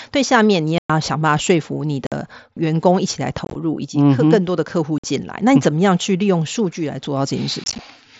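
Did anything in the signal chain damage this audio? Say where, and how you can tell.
Yes. Unconcealed Bluetooth headset packet loss on the headset-to-phone radio link at 0.78–0.90, 2.07–2.12, 3.45–3.55, 4.98–5.04 and 7.64–7.79 s. Lost voice packets leave abrupt silent holes; the 3.45 and 7.64 s events break into short scattered gaps that sound chopped and crackly.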